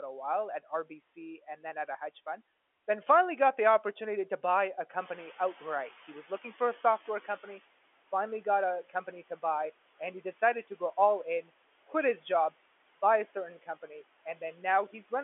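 Noise suppressor artifacts run through the whole speech clip. The suppressor pulls steady background noise down by about 17 dB, frame by frame. The residue sinks in pauses and swells under the talking.

The noise suppressor catching up comes next, from 4.99 to 7.55 s, after "opportunity to buy a". The room noise jumps by about 11 dB around 5 s. The noise estimate lags, so louder noise leaks through. It sinks over 2.56 s, reaching about 12 dB of reduction by "finally got a company". The telephone band still stops near 3.4 kHz.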